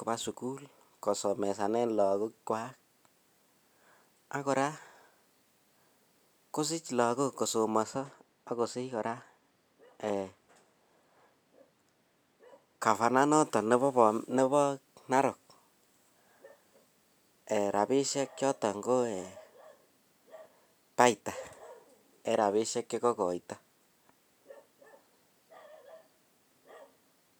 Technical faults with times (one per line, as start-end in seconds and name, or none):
7.83-12.86 de-emphasis applied wrongly